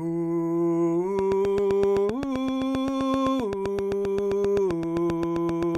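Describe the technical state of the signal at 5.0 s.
At 5.0 s the music carries a train of clicks, 1.19 to 5.76 s: near-identical pulses ticking evenly at 7.67 per second, likely interference. Their steady rhythm sets them apart from random crackle.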